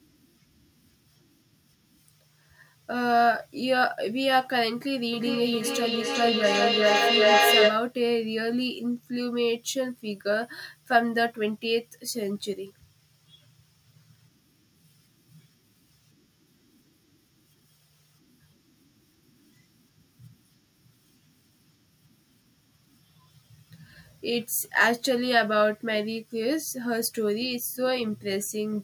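From 5.13 s to 7.98 s there's feedback echo between two devices. Two devices on the same call are sharing a room, so one plays out what the other's mic sent, and that mic picks it straight back up. Each device's echo canceller only removes its own playback, so the loop survives. Each bit of speech comes round again roughly every 0.4 s, thinner and more ringing each pass, and instead of fading the repeats pile up to about 5 dB louder than the speech itself.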